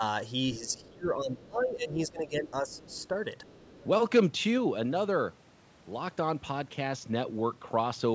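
From 0.59 to 3.14 s the speech is suppressed in double talk: for about two seconds in total it dips by up to roughly 20 dB, likely because the echo canceller could not separate the talker from the loudspeaker echo and turned both down. Across 0.67–0.89 s, 2.7–3.07 s and 3.42–3.86 s the other side's voice leaks through faintly, about 30 dB below the speech, likely residual loudspeaker echo that was not cancelled.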